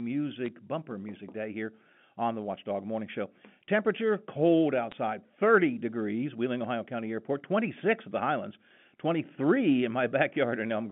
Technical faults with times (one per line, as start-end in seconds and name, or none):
0.46-0.48 bit errors on a digital phone line
4.92 bit errors on a digital phone line